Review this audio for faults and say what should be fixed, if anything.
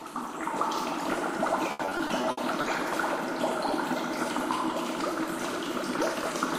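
From 1.71 to 2.65 s there is repeated packet loss (robotic sound). Short holes, the longest about 80 ms, are bridged by extending the preceding sound, so the passage turns choppy, which fits roughly eight gaps. About 28% of the stretch is concealed. To prevent it, carry the stream over a more stable network path with a larger jitter buffer and forward error correction.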